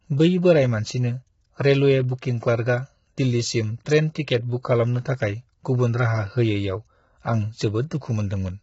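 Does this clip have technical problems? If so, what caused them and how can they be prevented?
Yes. Low-delay AAC compression affects the whole clip. The speech sounds rough and grainy, with noise filling the gaps between the pitch harmonics and nothing above 7.7 kHz. The likely cause is AAC-ELD, the low-delay codec used in video calls. The heavy damage fits a bitrate of about 16 kbps, too few bits to code the harmonics cleanly. To prevent it, record locally or raise the call's audio bitrate well above that level.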